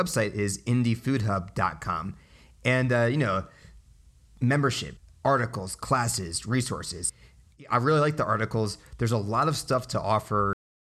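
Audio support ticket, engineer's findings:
Cut-off end at 10.53 s. Speech stops mid-sound and drops straight to digital silence for the last 0.35 s. Probable component: capture or playback path at stream stop. Final buffers never flushed or written. Differs from a fade-out or a noise gate closing: no decay, no tail, no gradual level drop, just an abrupt step to zero partway through a sound.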